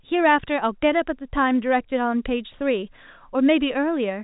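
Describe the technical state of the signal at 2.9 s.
At 2.9 s the speech is intact, carried cleanly through the G.711 telephone coding with its narrow band that stops short of 4 kHz.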